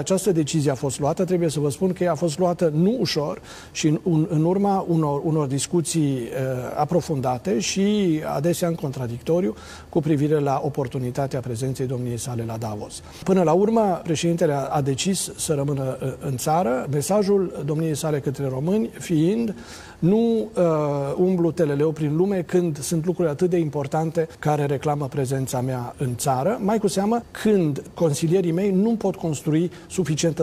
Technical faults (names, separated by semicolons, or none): none